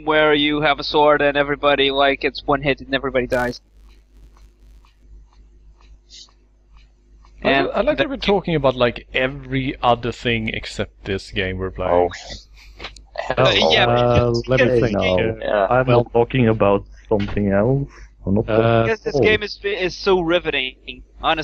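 From 3.32 to 5.04 s the audio picks up a 172 Hz buzz that tracks its level, a filter restarted on every block, fitting 256-sample blocks, each starting from silence.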